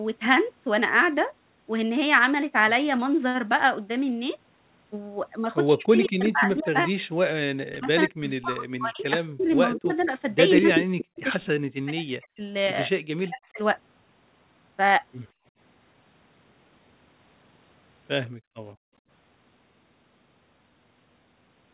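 Speech clip, band-limited to 4 kHz by the G.711 call path, with three problems. Between 5.74 and 13.6 s the talker gets speech suppressed in double talk, dipping as much as about 40 dB for roughly four seconds in total, likely the canceller ducking both sides at once. Echo leak shows up at 6.07–6.63, 9.4–10.08 and 10.75–10.79 s: a copy trailing 166 ms behind, about 10 to 20 dB under the voice, which points to a speakerphone whose canceller let some through. Then there's background gated by the echo canceller, with room tone dropping about 24 dB at 15.33–15.52 s and about 39 dB at 18.29–19.04 s while the loudspeaker played.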